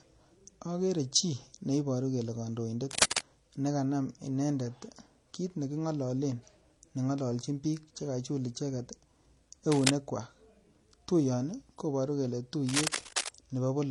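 Speech with layered codec smearing and nothing above 11.9 kHz throughout, likely transcoding between lossy codecs, consistent with 40 kbit/s MP3 then HE-AAC; mixed artefact types distinguish it from single-codec compression. Bursts of cable scratch noise at 2.91–3.22 s, 9.72–9.90 s and 12.67–13.29 s, the first about 5 dB above the speech and the others roughly as loud as it, likely from a worn connector; their dense, irregular rustle distinguishes them from isolated clicks.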